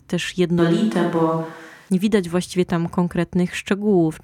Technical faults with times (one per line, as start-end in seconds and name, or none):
0.59-1.89 switch to a distant microphone